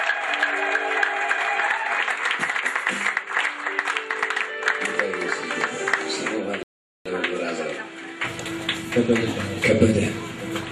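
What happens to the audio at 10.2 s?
Nothing goes wrong at 10.2 s; the audio plays through that moment intact, with no dropout, click or distortion.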